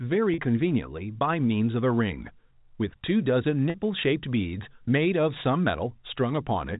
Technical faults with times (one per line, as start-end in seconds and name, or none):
0.34-0.38 packet loss with pitch repetition
3.70-3.74 packet loss with pitch repetition